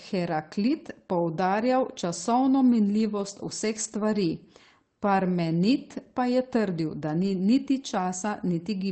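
Lost packets rebuilt from error correction at 3.75 to 4.01 s and 7.23 to 7.33 s in this speech clip: the decoder played low-bitrate copies carried in later packets, so there's no gap, just rougher, noisier stretches of about 140 ms and 60 ms, consistent with seven and three missing Opus packets.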